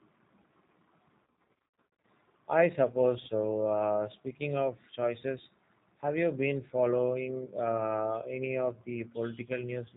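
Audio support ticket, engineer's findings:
G.729 codec, whole clip. Speech band-limited, nothing above 4 kHz; spectrogram shows a hard ceiling there with empty space above. Slightly rough, synthetic timbre, plainly audible. Mechanism: parametric rebuild from vocal tract filter, pitch predictor and sparse pulses per 10 ms frame, which fits an 8 kbit/s G.729A stream. Waveform looks smoothed, pulse-like within voiced stretches.

VoIP packet loss concealed by the speech codec, 1.24 to 2.04 s. Speech smears into buzzy, fading tones, with weak or distorted stretches lingering after each gap. Losses scattered across about 0.8 s, about 550 ms of it missing, longest gap 90 ms. Mechanism: decoder extrapolates last pitch and filter with falling gain, and its memory carries the error forward. Spectrogram shows flat harmonic smears and dimmed frames. Waveform shows repeated periods decaying in amplitude.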